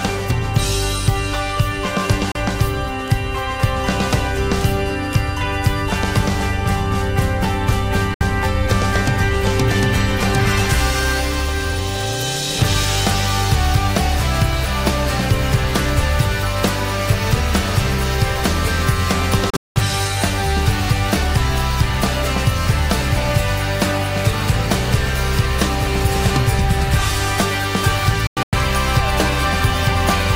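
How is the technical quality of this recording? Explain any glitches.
The recording has four digital broadcast dropouts, where the sound snaps to silence within about 3 ms and then returns. They occur at 2.32 to 2.36 s, at 8.14 to 8.21 s, in broken holes across 19.5 to 19.76 s with the longest gap lasting 192 ms, and again in broken holes across 28.27 to 28.53 s with the longest gap lasting 96 ms. These gaps happen when the receiver mutes on corrupted or missing frames. Their lengths fit 32 ms frames, and the audio that was sent during them is lost.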